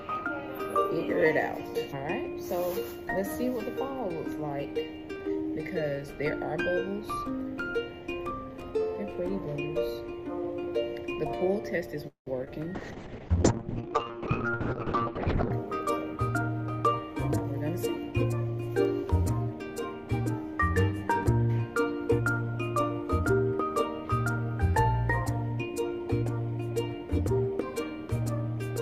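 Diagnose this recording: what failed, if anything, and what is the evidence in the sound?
Call audio freeze, 12.07 to 12.28 s, at the network and jitter buffer stage. The sound stops moving forward and the last fragment is stretched into a fading buzz that drops to silence for about 120 ms. When audio resumes, nothing has been skipped; a 191 ms gap has been inserted, and the delay has grown by the same amount. This points to packets that were likely held up in transit, leaving the jitter buffer empty.

Short concealed packet loss at 12.44 s, at the network and decoder stage. About 20 ms of audio never reached the decoder in time. The receiver covered the hole by extrapolating the preceding sound and then cross-fading back into the real signal, which produces a brief smear or wobble. Unlike the freeze just before it, this event removes material: those 20 ms are gone rather than delayed, so a very short sound in that spot may have vanished.

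Call bitrate drop, 12.76 to 15.59 s, at the codec stage in response to the network. The encoder's target fell from 48 kbps to 6 kbps and stayed at the floor for about 2.8 s. At that rate Opus narrows the coded band from 20 kHz to 8 kHz, so the audio turns muffled and rough, with a watery, coarsely quantised texture. It clears again once the bandwidth estimate climbs again.

Jitter buffer speed-up, 14.92 to 16.30 s and 17.97 to 18.59 s, at the receive buffer stage. The buffer held more audio than its target. To shed the excess, the receiver repeatedly cut out pitch-period-sized slices, running at 107% and then 110% speed with pitch unchanged. The first stretch removed around a tenth of a second and the second roughly 70 ms, so the audio sounds hurried in both spots.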